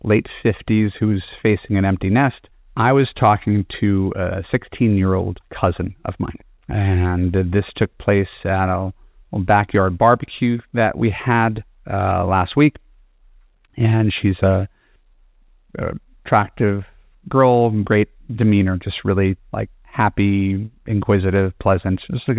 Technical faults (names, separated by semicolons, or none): none